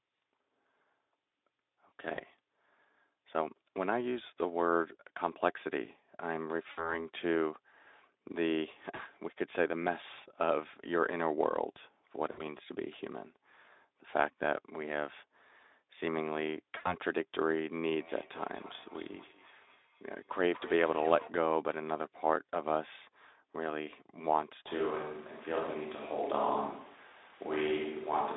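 At 2.15 to 2.20 s, 6.71 to 7.05 s, 8.95 to 9.00 s, 12.31 to 12.42 s and 16.77 to 16.95 s, there is VoIP packet loss concealed by the speech codec. Between 20 and 80 ms of audio went missing each time. The Speex decoder filled each gap by repeating its last pitch and filter shape at falling gain. The sound smears into a brief buzzy, fading tone. Because each frame builds on the one before it, the sound stays weak and rough a little past each gap.

From 18.0 to 21.4 s comes feedback echo between two devices. A second device on the same call is replaying this sound, and the microphone picks it up again. The echo canceller cannot remove sound played by another device. Each passage returns about a fifth of a second later. The repeats peak about 20 dB below the main sound and turn thinner and more ringing on each pass.

From 24.68 s to the end, the sound abruptly turns roomy and hollow. The bass thins, and room noise rises to around 30 dB below the main sound. 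The overall level barely changes. This is likely a switch to a distant microphone after the close microphone dropped out. The change is sudden, and the sound stays on the far pickup until the clip ends.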